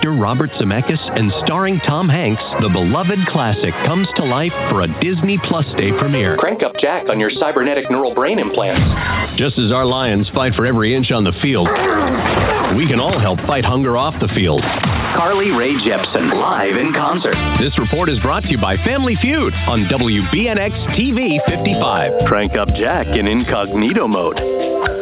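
No technical faults are audible anywhere here.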